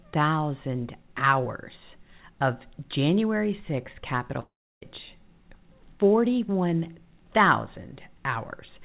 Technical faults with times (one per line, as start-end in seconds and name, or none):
4.40-4.83 long network dropout